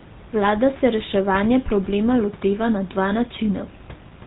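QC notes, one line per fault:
Throughout, GSM full-rate codec: buzzy, gravelly speech with nothing above 4 kHz, consistent with 13 kbps regular-pulse excitation; spectrogram shows a hard ceiling at 4 kHz.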